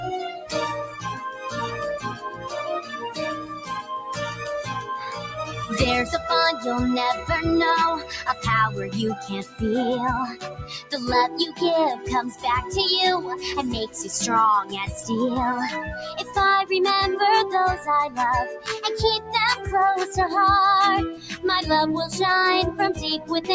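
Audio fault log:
Throughout, noise suppressor applied to music or sounds: a speech-tuned suppressor mistakes steady tones and tails for noise, so level swings by roughly 10 dB, pumping and thinning.
0.38–5.57, 8.0–12.45, 13.87–15.1, 16.02–16.36, 17.77–19.29 and 21.15–21.44 s, sound cut by the noise suppressor: held and decaying sound is pushed down by about 9 to 14 dB, so tails sink while attacks survive.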